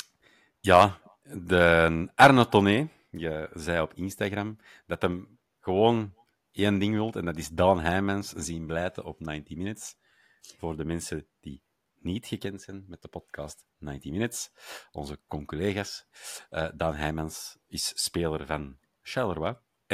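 No technical faults can be heard anywhere in the recording; the signal stays continuous and steady throughout.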